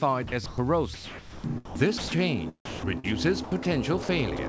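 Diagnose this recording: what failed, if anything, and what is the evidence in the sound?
The failure is in call processing at the sender. The sound is chopped by the voice detector five times: 0.28 to 0.58 s, 0.94 to 2.18 s, 2.65 to 3.06 s, 3.44 to 3.65 s, and 4.37 s to the end. In each span, parts of the sound give way to synthetic noise. The most sound replaced in one span totals about 740 ms, the least about 31 ms. The likely cause is the detector toggling transmission off and on, with the receiver filling gaps with comfort noise.

Separately, sound is dropped by the voice detector from 4.03 to 4.09 s. This is one clean 60 ms hole. The sound there is replaced whole by steady comfort noise, then returns. The stage is again sender-side call processing. The detector likely judged this stretch as background and briefly stopped sending. The receiver synthesised noise in its place. This is a single gap, not repeated toggling. 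Throughout, nothing is heard above 8 kHz, consistent with a G.722 call path.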